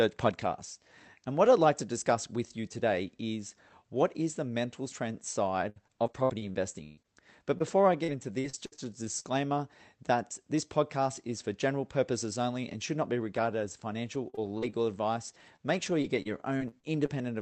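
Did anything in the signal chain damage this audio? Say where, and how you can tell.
Yes, at the network stage: repeated packet loss (robotic sound) from 5.69 to 9.26 s, after "is the mental strength", and from 13.26 to 17.2 s, after "and should not be". Recurring holes of up to 127 ms are filled by extending the previous sound, which gives a choppy texture with pieces missing. A single dropout would not repeat this way.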